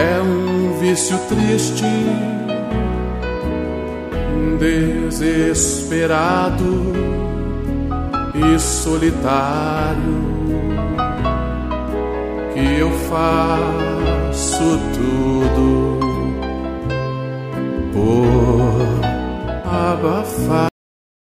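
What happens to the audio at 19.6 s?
Nothing goes wrong at 19.6 s; the audio plays through that moment intact, with no dropout, click or distortion.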